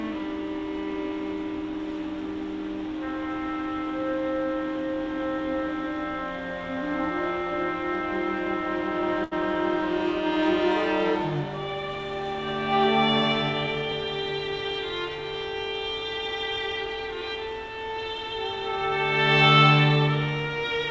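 The audio, which comes through a call path with nothing above 8 kHz (consistent with G.722 at 64 kbps), has one short stall from a late packet at 9.24 to 9.33 s. The jitter buffer ran dry, so the receiver stretched the last sound for about 75 ms until the packet turned up. Nothing's lost, but everything after runs 75 ms later.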